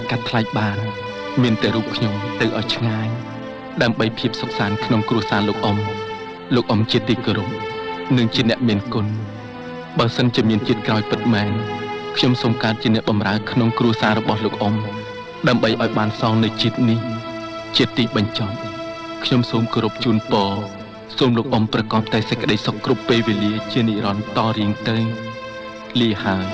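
At 2.40 s there is a skip ahead. Roughly a second of audio never reaches playback, either lost in transit or discarded when the jitter buffer overflowed while later material was already queued. Nothing fills the hole, so the sound on either side is spliced almost directly: the listener hears an abrupt forward jump with no silence, and whatever fell in that second is simply absent. The playout delay drops by about the same amount at that moment.

From 4.26 s to 6.47 s the jitter buffer speed-up is audible. The buffer was holding more audio than its target, so the receiver trimmed short pitch-period-sized pieces again and again to shed the excess, about a fifth of a second in total. Playback runs at 108% speed across that stretch with the pitch unchanged, giving a slightly hurried, compressed feel rather than any tonal shift. The G.722 call path at 64 kbps is also heard, with nothing above 8 kHz.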